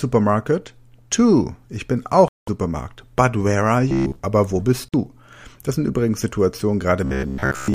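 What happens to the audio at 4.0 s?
Around 4.0 s, from 3.90 to 4.19 s, you get robotic sound from repeated short buffers. Audio is likely arriving too late, so a roughly 15 ms chunk gets looped for most of that stretch. The speech collapses into a rigid, metallic buzz locked at about 66.7 Hz.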